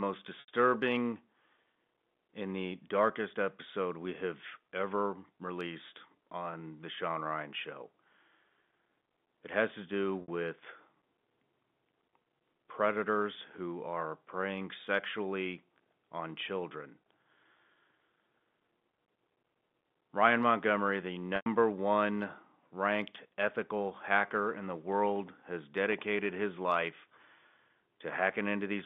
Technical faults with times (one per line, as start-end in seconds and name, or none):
0.40-0.48 packet loss with pitch repetition
10.22-10.28 packet loss with pitch repetition
21.36-21.46 packet loss with pitch repetition